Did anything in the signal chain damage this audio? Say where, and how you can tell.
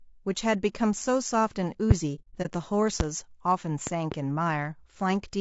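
Yes. Low-delay AAC compression runs throughout: the speech sounds rough and grainy, with noise between harmonics, likely from AAC-ELD at a bitrate around 32 kbps.

Loud pops at 1.91–1.93 s, 3.00–3.03 s, and a pair between 3.87 and 4.14 s sit about 15–20 dB above the speech, likely voltage spikes in analogue wiring or the driver.

AAC frame loss with muting appears from 2.15 to 2.50 s: about 150 ms of soft-edged gaps, the longest near 70 ms, where the decoder zeroed lost frames.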